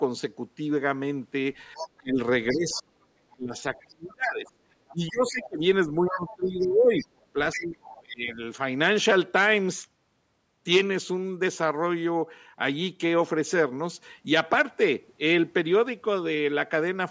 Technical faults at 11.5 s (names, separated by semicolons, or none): none